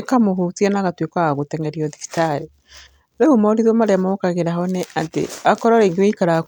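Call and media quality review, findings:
No call or media quality issues found in the speech.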